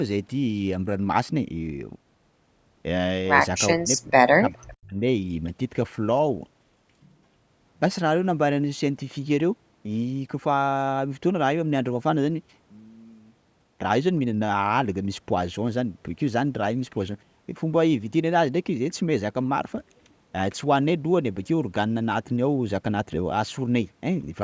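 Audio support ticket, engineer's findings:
Speech suppressed in double talk, 3.74 to 4.95 s. Talker's level dips sharply, deepest drop about 40 dB, roughly a second of audio affected in total. Likely cause: echo canceller unable to separate near-end talker from far-end loudspeaker echo during simultaneous talk, attenuating both. Band-limited to 8 kHz with low bass removed by call mic processing, which is expected.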